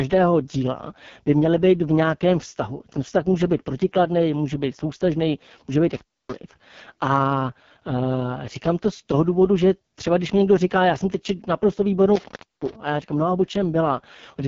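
AMR wideband (HD Voice) codec damage runs throughout the speech. The roughness points to this codec's lowest mode, around 6.6 kbit/s. The codec models the vocal tract and drives it with coarse pulse patterns, so at this rate the speech turns rough and raspy. The top band is filled with shaped noise rather than real detail, giving the upper range a hissy, synthetic sheen, and there is nothing above 7.3 kHz.

Intermittent contact cuts the sound at 5.94 s, with the line open for about 285 ms before it returns at 6.35 s. The same fault strikes again at 12.16 s, this time open for about 343 ms before the signal comes back at 12.75 s. In both cases a loose connection briefly breaks the circuit, so the speech drops out abruptly, crackle marks each edge as the contact makes and breaks, and faint hiss fills the gap.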